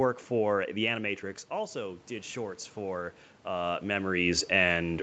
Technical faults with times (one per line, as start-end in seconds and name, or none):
1.48-4.95 automatic gain rising